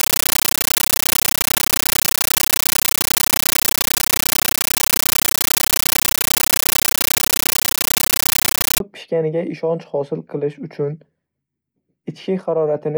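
A compressed stream played as audio fills 0.0 to 8.8 s of this speech clip. Undecoded Dolby Digital data is output as samples, giving 13.3 ms noise bursts 31.25 times a second, loud chattering static that points to AC-3 near 640 kbps, until "pishganiga ishonch hosil qilish".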